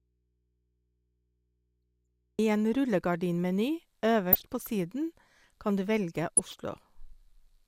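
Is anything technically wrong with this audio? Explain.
Yes, there are two faults in this speech clip.

From the start until 2.39 s there is an audio dropout to a faint residue. The signal is already missing, leaving only mains hum about 45 dB below programme level. The abrupt return points to a likely break upstream while the downstream path stayed live.

DAB burbling occurs at 4.32 to 4.45 s and 6.37 to 6.65 s. Residual bit errors slip past error correction into the MP2 data; corrupted samples put short blips of noise in single sub-bands, and corrupted scale factors make sub-bands jump in level, producing brief blips of noise over the speech.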